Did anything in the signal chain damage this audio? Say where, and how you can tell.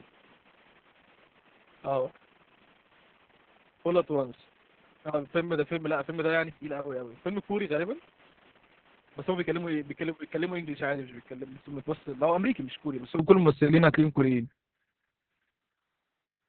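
Yes, at the codec stage: Opus voice compression in narrowband SILK mode, which fits a bitrate near 6 kbps. Throughout the clip nothing survives above 4.5 kHz, and the coarsely coded excitation leaves the speech muffled, hoarse and faintly robotic.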